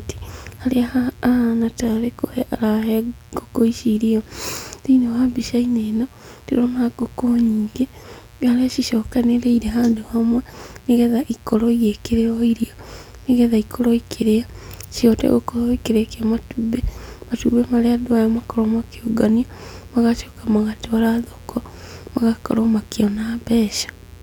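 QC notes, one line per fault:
Throughout, mains buzz: a steady, raspy buzz sits under the speech at about 30 dB below it, built on a 60 Hz fundamental with a dense stack of harmonics climbing into the kilohertz range, the mark of sharp switching spikes entering twice per mains cycle.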